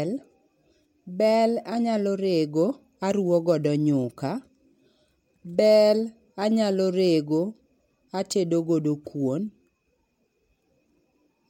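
A fine hiss and roughness sits on the speech throughout, swelling on loud, bright sounds and vanishing in pauses. This is sample clock jitter: the converter's clock wanders by a few microseconds, so samples on steep waveform slopes land off-time, leaving error about 35 dB below the signal.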